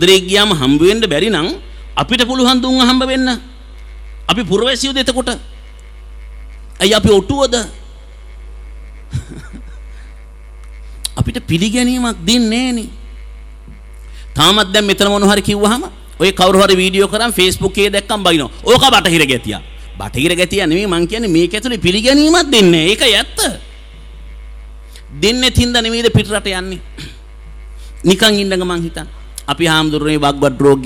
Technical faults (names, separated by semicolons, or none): hard clipping